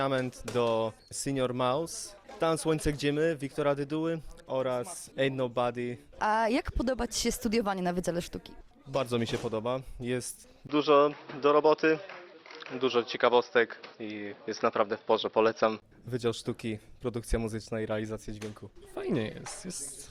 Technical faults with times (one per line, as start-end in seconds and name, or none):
10.67-15.82 input switched to a poorer device